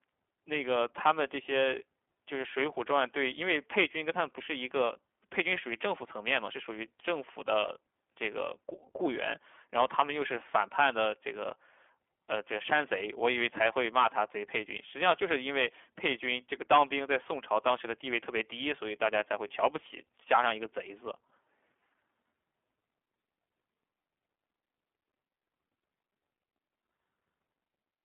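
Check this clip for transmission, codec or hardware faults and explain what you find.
One codec fault runs through the whole recording.

iLBC codec, throughout: the speech has been squeezed through a narrowband VoIP codec that codes each short frame's excitation independently, and the rough, slightly synthetic grain fits 20 ms frames at the 15.2 kbps mode. The line band sits at roughly 200 Hz to 3.4 kHz, with nothing above 3.6 kHz, so the voice sounds boxed-in and thin. The coding damage is plainly audible as a gritty, buzzy texture on every phrase.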